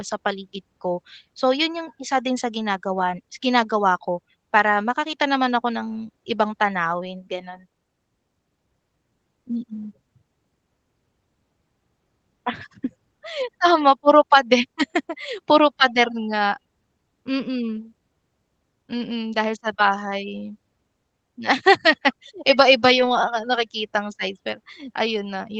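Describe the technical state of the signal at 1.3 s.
At 1.3 s the speech comes through intact, with no dropout, glitch or distortion, carried over the call path's Opus codec with its audio band topping out around 8 kHz.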